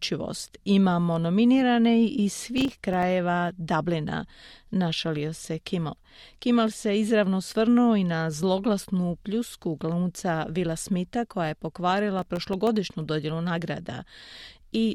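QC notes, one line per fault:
2.58–3.03 s, processor overload crackle, just after "nominirane iz". The sound breaks into a gritty burst. Many very short buffers, a few milliseconds each, miss their deadline in a row. Each one drops out to silence with hard edges, roughly fifteen of them here.
12.19–12.67 s, processor overload crackle again. Around ten buffers drop to silence. The sound tears into crackle, then it clears as the load eases.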